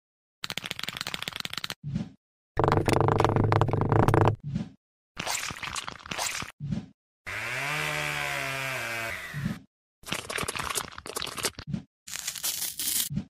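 From 11.46 s to the end at 13.30 s, a time-stretched section runs about 1.82 times faster with unchanged pitch, sounding rushed, likely from software dropping short segments. On a spectrogram, harmonics keep their frequencies while events crowd closer together.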